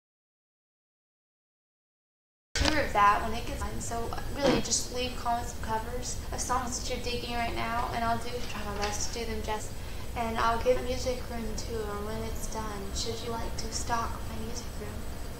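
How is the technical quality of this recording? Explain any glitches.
The recording has one glitch, at the very start. From 0 to 2.56 s there is an audio dropout to silence, most likely from input lost while zeros kept being written. It is silence with no room tone, unlike a quiet lead-in, and the sound then cuts in abruptly.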